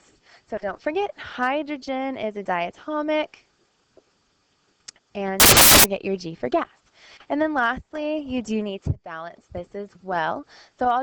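From 5.4 s to 5.84 s the audio is abruptly swamped by loud, harsh broadband noise lasting a little under half a second, then cuts back just as suddenly. This is samples built from the wrong bytes: across that stretch the reader assembled each sample's bytes incorrectly, whether shifted by one byte, in reversed order or on the wrong alignment, so the rapidly fluctuating low-order bits landed in the most significant position and turned the signal into broadband noise.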